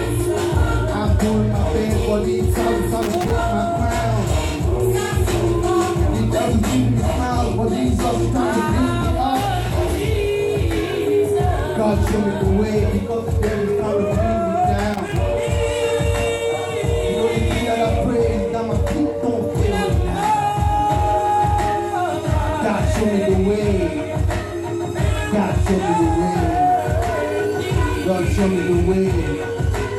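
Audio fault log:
3.02–3.31 s and 14.94–15.16 s, loose connector crackle: a worn contact intermittently makes and breaks, chopping the signal into irregular scratchy bursts lasting about a quarter second each.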